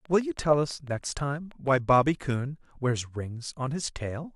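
A speech recording with a train of clicks from 0.05 to 1.69 s. About ten near-identical clicks tick at a steady 6.2 per second, roughly as loud as the speech. The likely cause is interference from nearby equipment or a faulty connection or power supply.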